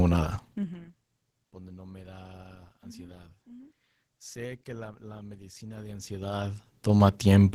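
From start to finish the speech carries Opus voice compression at a low rate, with damage that is plainly audible. The codec runs in hybrid mode: linear-prediction coding handles the band below 8 kHz and a transform layer fills in the top of a fullband signal. The excitation is coded coarsely, leaving the voice hoarse and slightly robotic, which fits a rate around 16 kbps with 20 ms frames.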